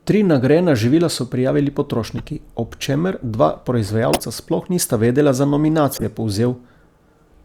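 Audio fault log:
2.17–2.22 s, 4.11–4.20 s, 5.93–6.03 s, 7.04 s: corrupt frame decoded. Damaged frames play misplaced energy as chirps or bursts, loudest near 0 dBFS at 4.11 s, faint at 7.04 s, seen as short vertical spectrogram smears.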